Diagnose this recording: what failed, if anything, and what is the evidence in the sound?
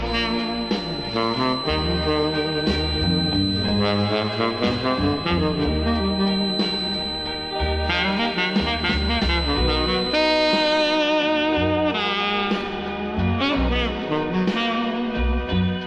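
A wavering 4 kHz whistle sits well below the sound from 0 to 11.1 s, likely a feedback whistle from a speaker-to-microphone loop balanced at oscillation.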